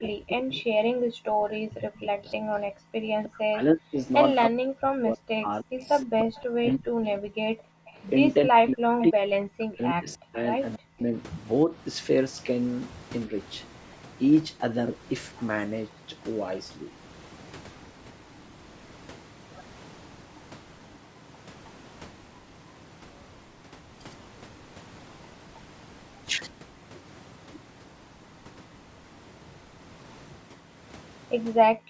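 From 0.0 to 11.74 s the speech keeps dipping and breaking up, for about seven seconds in all, sometimes dropping around 40 dB. This is likely speech suppressed in double talk. The echo canceller could not tell the talker from the returning echo, so it turned both down.

A faint echo leak appears at 0.05 to 0.09 s, about 20 dB below the speech. The echo canceller likely let some loudspeaker sound through to be sent back. The copy trails the voice by 314 ms.

At 2.81 to 2.95 s the room sound drops out sharply, by about 40 dB, for roughly 150 ms. This is background gated by the echo canceller. It clamped the microphone while the loudspeaker played.

A longer echo leak runs from 5.81 to 9.1 s. The same 314 ms delayed copy is audible here, now about 15 dB below the speech. It likely comes from the same incomplete cancellation.

At 13.27 to 13.35 s the speech briefly dips by around 5 dB. This is again likely speech suppressed in double talk, lasting roughly 70 ms.

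The background is gated once more from 31.75 s to the end. It drops about 36 dB for roughly 150 ms.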